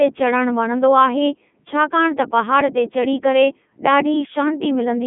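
Speech passes through a Codec 2 vocoder for its whole length. It sounds robotic and buzzy, which fits 3.2 kbit/s. The band runs from 150 Hz to 3.4 kHz, with nothing above 3.6 kHz.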